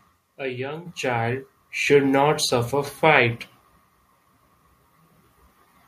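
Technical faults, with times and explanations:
Nothing in this speech stood out as a technical fault on listening.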